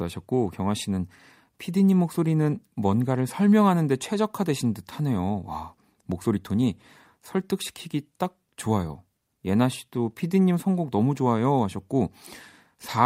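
A short speech recording, and nothing in it comes across as a technical problem at any point.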